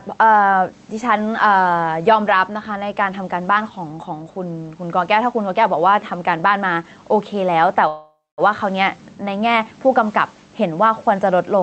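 All the way through, the speech has gain pumping: the gain ducks down whenever the talker gets loud, with a swing of several dB. Loud and soft syllables sit closer together than they should, so everything sounds a bit squashed. The likely cause is input gain set way too hot, with a fast limiter or compressor clamping down on each loud moment.

At 7.87 s there's a call audio freeze that runs to 8.41 s. The last bit of sound gets stretched into a buzzy tail that fades out, followed by roughly a quarter second of dead silence. Then the audio picks up exactly where it stopped, so nothing is lost, but everything after that point lands about half a second late. Most likely packets stalled in transit and the jitter buffer ran dry. The call codec's top end stops around 8 kHz, which fits Opus at something like 32 kbps.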